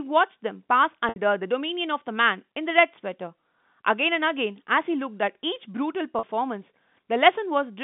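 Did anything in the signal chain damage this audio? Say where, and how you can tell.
Yes, at the network stage: packet loss with pitch repetition, twice, at 1.09 to 1.16 s (70 ms lost) and 6.19 to 6.23 s (40 ms lost). Each time the receiver's concealment loops the last pitch cycle, so the sound briefly holds with a buzzy, static quality. The longer gap starts fading before the signal resumes. The gap lengths fit 10 ms packets. The G.711 telephone band, roughly 150 Hz to 3.6 kHz, is intact around both.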